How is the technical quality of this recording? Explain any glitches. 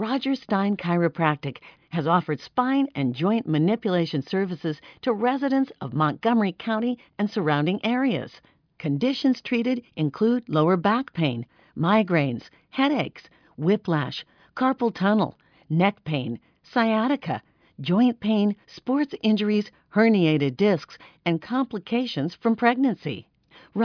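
The technical quality of this recording holds up, with no glitches to explain.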